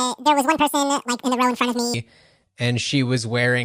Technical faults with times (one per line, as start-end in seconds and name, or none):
0.00-1.94 wrong sample rate